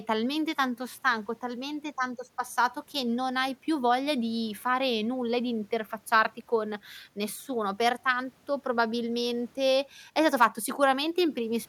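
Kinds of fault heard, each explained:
No technical faults can be heard anywhere in the audio.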